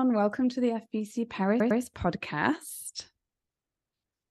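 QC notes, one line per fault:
1.60–1.81 s, repeated frames: the same 0.1 s block of speech plays two extra times, a stutter that fits four compressed frames resent, adding about 0.21 s.
3.76–3.87 s, repeated frames: that same-length 0.1 s block plays once more, a shorter hiccup from duplicated frames that stretches the clip by about 0.1 s.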